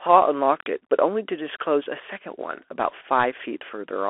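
From start to finish the speech passes through a Bluetooth CVSD headset codec, whose one-bit delta coding with adaptive step size fits a 64 kbps link. The band is confined to roughly 300 to 3400 Hz, with nothing above 3.8 kHz, and the coding damage is plainly audible.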